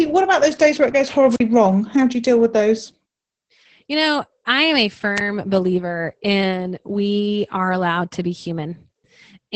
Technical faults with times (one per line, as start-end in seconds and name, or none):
0.00-9.55 Opus voice compression
1.29-1.40 wireless microphone squelch dropout